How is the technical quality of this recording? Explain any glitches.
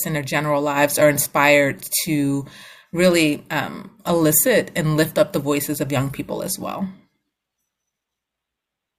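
Nothing in this recording comes across as a glitch; it just rolls along with no technical trouble worth pointing out.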